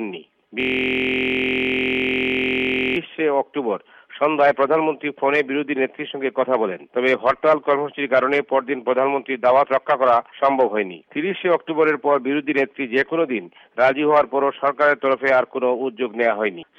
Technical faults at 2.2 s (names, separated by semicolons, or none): system hang loop